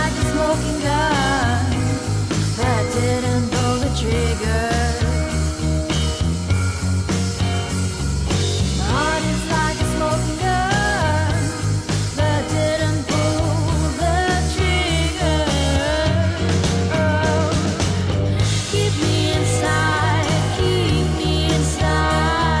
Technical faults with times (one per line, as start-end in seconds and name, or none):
none